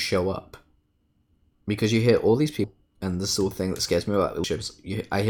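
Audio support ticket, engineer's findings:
Audio missing between chunks at 0.84, 2.64 and 4.44 s. Speech jumps forward abruptly, roughly a fifth of a second lost each time, with both sides butted together and no silence. This is likely a recorder dropping audio at each 2.0 s chunk handover while closing one block and opening the next.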